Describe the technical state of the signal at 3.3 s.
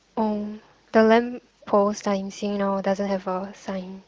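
At 3.3 s the speech is intact, with no dropout, distortion or other fault audible through the AMR wideband (HD Voice) coding at 18.25 kbit/s.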